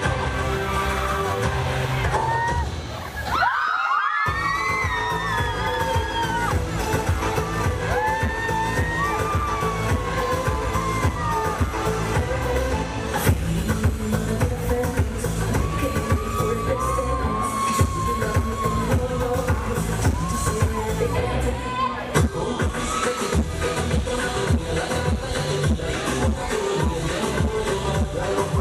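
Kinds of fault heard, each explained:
No kinds of fault are heard in this clip.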